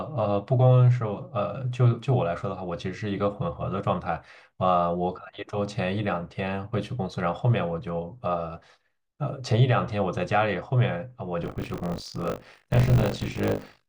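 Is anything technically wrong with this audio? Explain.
Yes. From 11.42 s to the end, there is buffer tearing. The code filling the playback ring buffer and the hardware draining it have drifted out of step, so their positions cross inside each period. About a fifth of every buffer plays audio left over from an earlier lap, roughly 40 ms stale, spliced in with abrupt joins. The result is a robotic buzz at 50 Hz riding on the speech, which fits a 20 ms buffer period.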